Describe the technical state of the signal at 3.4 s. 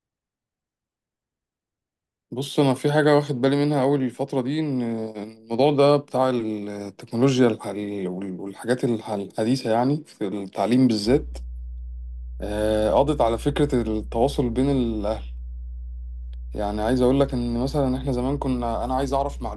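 Nothing at 3.4 s points to a technical fault, and the speech signal sounds intact at that moment.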